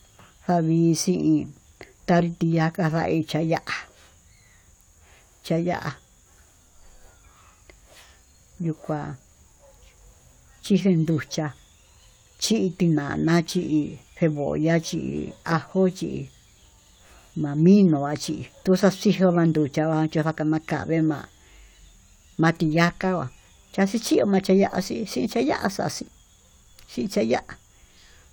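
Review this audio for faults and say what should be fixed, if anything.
No faults turn up in this audio, so there is nothing that needs to be fixed.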